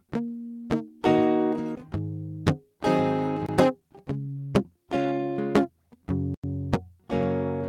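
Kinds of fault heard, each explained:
Skip ahead: At 1.75 s the music jumps forward with no gap. Roughly 0.4 s of audio was discarded while later audio was already queued, and the two sides of the missing stretch are butted together almost directly, breaking the musical line.
Block of digital silence: Output drops to silence and back with no fade. The first block, at 3.46 s, lasts 23 ms. The second, at 6.34 s, lasts 93 ms and is heard as a brief hole.
Jitter buffer speed-up: From 3.69 s to 5.19 s the receiver trims an over-full buffer by cutting short pitch-period pieces repeatedly. This removes roughly 0.2 s in total. The music runs at 112% speed with unchanged pitch, so the tempo visibly rushes.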